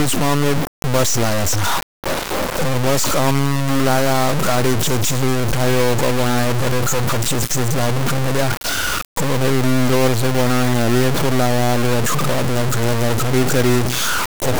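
Throughout the speech, the audio was likely truncated to about 3 bits without dither, so harsh grainy distortion tracks every sound, sitting only about 5 dB below it.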